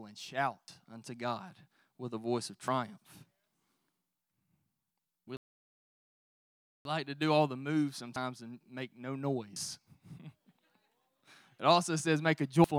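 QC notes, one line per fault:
0.68, 2.68, 5.24, 8.16, 9.56 and 12.64 s, dropped buffer (overrun). Each is a jump ahead with no gap. About 40 ms goes missing at most points. About 70 ms is lost at 5.24 s and about 100 ms after "also says make a". The 8.16 s jump sits between "do all the moves" and "and make no". The 9.56 s jump follows "and make no". The likely cause is that unread samples were overwritten before capture.
5.37 to 6.85 s, playback stall. The speech stops mid-flow and the output goes silent for about 1.5 s. Then it carries on. The likely cause is that the player ran out of data or its thread was blocked.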